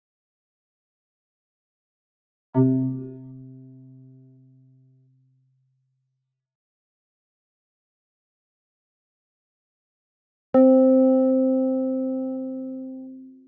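A noise suppressor applied to music or sounds runs through the whole clip. The suppressor is tuned for speech, so it treats steady tones, ambience and decaying tails in these everyday sounds as noise and pulls them down, while sharp onsets slip through. Its attenuation swings over a range of roughly 20 dB, so the sound pumps and flutters as held portions dip and recover. The call's microphone processing also limits everything to 8 kHz and below.

From 2.89 s to 5.94 s, about three seconds of sound are cut by the noise suppressor. Here it misreads the material as noise and attenuates it harder than the surrounding audio, with the deepest drop reaching about 15 dB. Sustained and fading parts suffer most: they sink in level and their decays are chopped short, leaving the passage thin, while any abrupt transients within it remain comparatively intact.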